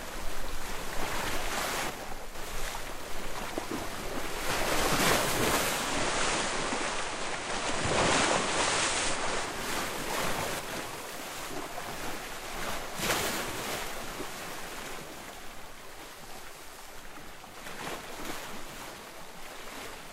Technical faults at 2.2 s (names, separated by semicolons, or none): one channel drops out